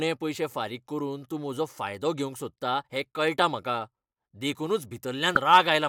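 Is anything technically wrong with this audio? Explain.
Yes. The speech has damaged data in a compressed stream, at 0.34 s, just before "फारीक करून तूं म्हजो", and again at 5.35 s. Corrupted bytes break the frames there. The decoder loses sync and hunts for the next valid frame, producing a brief blip.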